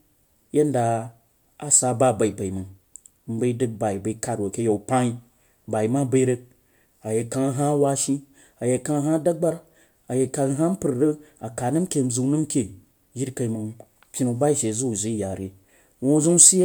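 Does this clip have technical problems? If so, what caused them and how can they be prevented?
No, there's nothing wrong to hear in this speech clip, so there's no cause to track down and nothing to prevent.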